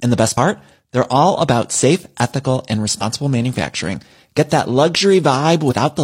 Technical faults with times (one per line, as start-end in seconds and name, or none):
0.33-0.37 damaged data in a compressed stream
2.98-3.03 damaged data in a compressed stream
5.67-5.74 damaged data in a compressed stream